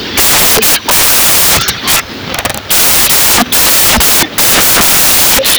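From start to finish the speech comes with loud, harsh broadband noise: samples built from the wrong bytes, so the fast-changing low bits dominate each value. The waveform looks like dense hash, and the spectrogram shows flat broadband energy.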